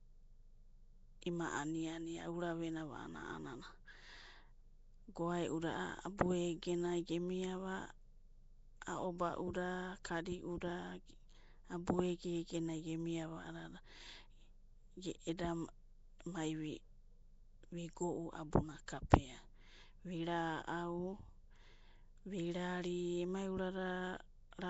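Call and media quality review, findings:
Likely Nellymoser compression, throughout. Fixed two bits a sample per 256-sample block starves weak bands, which get noise fill. Plainly audible rough, hissy halo and smeared, underwater speech, nothing above 7.7 kHz, consistent with a 32 kbps stream.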